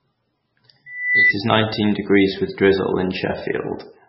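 Speech runs throughout with heavy watery, swirling artefacts and nothing above 5.6 kHz, likely MP3 compression at a very low bitrate, consistent with about 16 kbps. From 0.86 to 1.34 s, just before "is nineteen degrees with", a loudspeaker feedback squeal appears. A 2 kHz tone swells over roughly a third of a second to about 5 dB above the speech, as the microphone-to-loudspeaker loop exceeds unity gain at that frequency.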